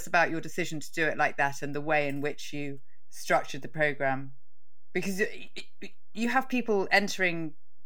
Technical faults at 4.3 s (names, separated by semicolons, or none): DC offset